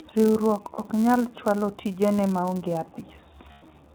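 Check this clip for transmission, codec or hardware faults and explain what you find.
Three faults are audible in this speech: iLBC codec coloration throughout, a periodic buzz from a filter restarted on every block, and two brief dropouts from lost iLBC frames.

The iLBC codec damage is plainly audible across the whole clip. The band stops at 4 kHz, and the voice has a rough, slightly synthetic edge. That edge comes from the codec building each frame's excitation on its own, here in its 20 ms frame mode. Unlike a plain low-pass telephone filter, the roughness sits inside the voice rather than just dulling it.

The filter restarted on every block adds a steady buzz at 172 Hz, which fits a 256-sample block. Each block begins from an empty filter state, so each start carries a small transient. The buzz rises and falls with the speech level and has a fixed rate that doesn't track pitch, which separates it from codec roughness or hum.

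Lost iLBC frames occur at 0.74 to 0.80 s, about 40 ms, and at 3.52 to 3.63 s, about 100 ms. In each gap the decoder repeats the last pitch cycle mixed with noise. The result is a held, buzzy vowel that fades more in the longer loss. Clean speech returns almost immediately afterward, unlike codecs whose errors carry over into later frames.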